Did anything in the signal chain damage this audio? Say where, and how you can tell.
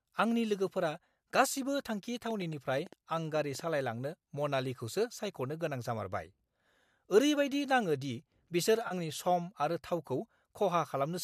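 Yes, two spots. From 2.31 to 3.61 s there's a train of clicks, about ten of them at roughly 8 per second with uneven spacing, each about as loud as the speech. That's likely interference from nearby gear or a faulty connection or power supply, in the analogue wiring or converter stage.

The second one sits in the network or codec stage. At 8.88 s there's a short smeared, phasey patch lasting about 30 ms. That's AAC frame loss with concealment, with the decoder patching the gap from the last good spectrum. The length fits roughly three of the 10 ms frames this likely low-delay AAC stream uses.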